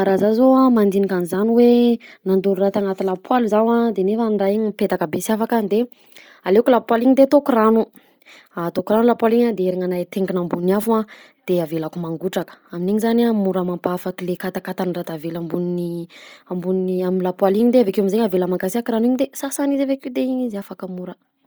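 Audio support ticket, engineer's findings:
Bluetooth LC3 compression, whole clip, speech. Breathy, grainy edge on all voiced sound, heavy codec damage. Likely cause: LC3 encode in the LE Audio link, consistent with about 32 kbps and 10 ms frames. Upper spectrum zeroed, then noise-filled, so highs turn to hiss rather than disappearing. Unlike a plain low-pass or narrowband link, content still reaches about 20.2 kHz. Unlike swirly MP3-style artefacts, the damage is uniform grain, not tonal warbling.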